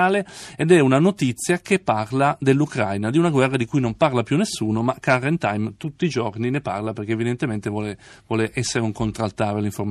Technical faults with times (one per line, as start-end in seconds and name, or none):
0.00-9.91 MP3 compression